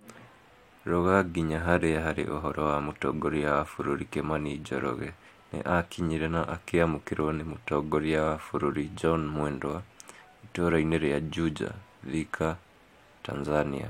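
No technical fault can be heard anywhere in the speech, with the signal holding steady and continuous throughout.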